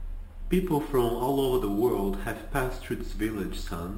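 Speech whose rate was raised by simple sample-and-hold repetition, with no smoothing filter, which fits an original rate near 12 kHz. The result is imaging throughout: a mirrored spectrum between 6 and 12 kHz at about 22 dB below the voice, heard as a metallic fizz tracking loudness.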